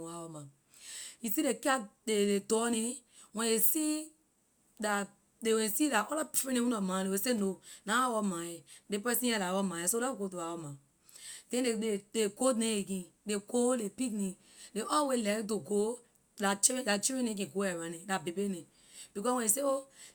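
No technical faults are audible anywhere in this speech recording.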